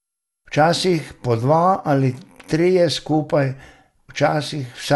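Throughout this speech clip the sound has a swirly, watery smear and a hollow, scooped quality, consonant attacks are blurred rather than crisp, and nothing is present above 11.8 kHz. This points to generation loss, likely from the audio being decoded and re-encoded about three times through a lossy MP2 chain at around 96 kbit/s. Each pass quantises on a shifted frame grid, so the noise and spectral gaps compound beyond what that bitrate alone would produce.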